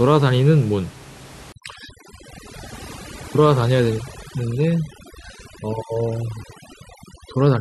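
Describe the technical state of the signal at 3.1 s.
At 3.1 s the speech is under overdone noise removal, which runs from 1.52 s to the end. The denoiser is set too hard. It cuts bands near its noise estimate, taking quiet speech detail too. The background drops and breaks up into twinkling specks.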